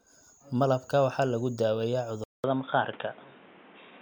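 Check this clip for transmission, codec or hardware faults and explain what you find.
One fault is present in the speech. At 2.24 s the input likely switched to a poorer device. The waveform goes flat for 200 ms, then the spectrogram shows a hard ceiling at 3.8 kHz, with duller sound and faint new background noise.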